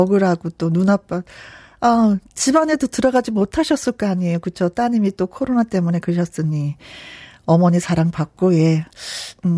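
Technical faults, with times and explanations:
No technical faults can be heard in this speech.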